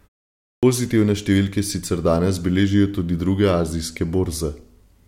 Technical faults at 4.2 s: none

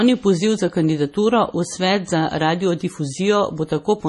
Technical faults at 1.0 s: MP3 compression

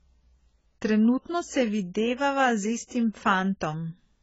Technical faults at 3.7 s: AAC compression

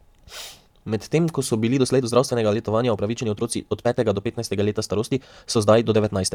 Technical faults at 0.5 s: none

